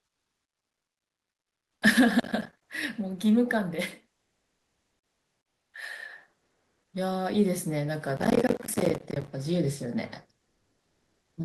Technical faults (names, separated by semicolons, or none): processor overload crackle; comfort noise in place of the background